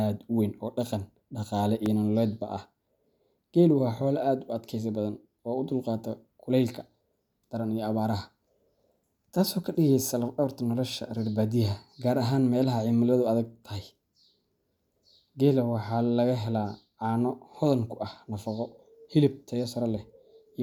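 At 1.86 s, after "weyn oo dhaqan dhaqaale", a repeated buffer: new audio arrived late, so a 2.67 ms block, which fits a 128-sample buffer, replayed once, heard as a brief click.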